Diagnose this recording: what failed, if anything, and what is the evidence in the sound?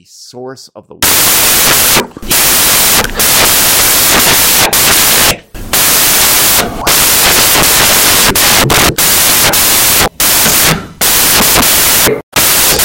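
Samples built from the wrong bytes, from 1.03 s through to the end: a sample-format conversion failure. At 1.03 s the speech gives way to loud, harsh broadband noise that continues to the end. The reader is assembling each sample's bytes out of step, swapped or misaligned, so the rapidly changing low-order bits land in the most significant position and swamp the real signal.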